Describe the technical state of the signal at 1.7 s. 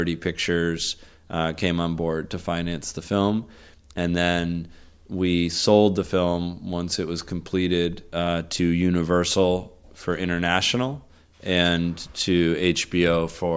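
At 1.7 s the speech signal is intact, with no audible technical fault at that moment.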